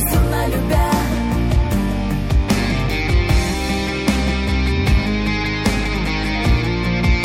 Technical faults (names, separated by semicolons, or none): none